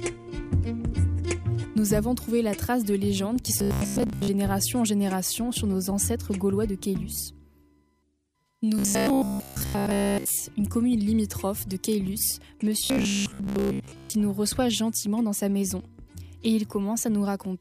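Robotic sound from repeated short buffers occurs from 3.59 to 4.28 s, 8.79 to 10.42 s and 12.80 to 14.14 s. In each stretch the sound becomes a rigid, metallic buzz pitched at 66.7 Hz. A 15 ms slice is likely being looped because fresh audio arrives too slowly, with most of the real material skipped. The repetition imposes that fixed pitch while the sound's outline is still loosely followed.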